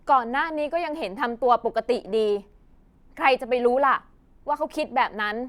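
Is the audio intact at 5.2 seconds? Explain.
Yes, at 5.2 seconds the audio is intact, with no fault audible at that moment.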